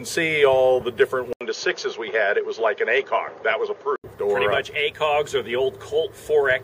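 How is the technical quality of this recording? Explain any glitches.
The recording has one glitch. From 1.33 to 4.04 s the input likely switched to a poorer device, whose narrower band cuts everything above 6.8 kHz. The sound turns duller, with an 80 ms gap at the switch, a new noise floor far below the signal, and unchanged loudness.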